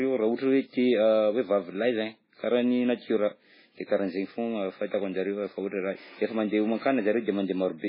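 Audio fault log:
throughout, MP3 compression: the speech was likely squeezed through an MP3 encoder starved of bits, with damage heavy enough to fit a very low bitrate near 16 kbps. Short of bits, the encoder drops everything above 5.3 kHz, so the top end ends abruptly and sibilants turn dull. Weak frequency lines that the encoder keeps zeroing and restoring frame by frame give the whole clip a watery, swirling texture, and consonant onsets smear.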